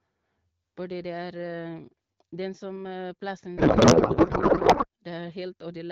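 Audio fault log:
3.57–4.86 s, codec payload misread: the speech abruptly turns into garbled noise and warble that barely tracks the talker, then snaps back to clean HD Voice audio. The decoder is taking octet-aligned AMR frames as if they were bandwidth-efficient, so every field is read from the wrong bit position and the frames decode to nonsense that still looks valid, in a 12.65 kbit/s AMR-WB stream.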